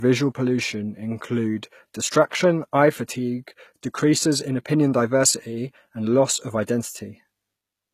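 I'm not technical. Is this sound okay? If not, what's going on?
No. Throughout the speech there is nothing above 14.9 kHz, and the earlier squeezing has left its flaws. This is likely low-bitrate audio saved at a high bitrate: a poor copy re-saved as a large file, which cannot restore what the first copy had already lost.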